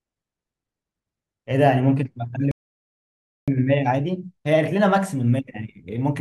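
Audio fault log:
2.51–3.48 s, playback stall: the speech cuts out mid-flow and the output stays silent for about 0.96 s before resuming. The likely cause is the player running short of buffered data or its audio thread being blocked, leaving nothing to output until it recovered.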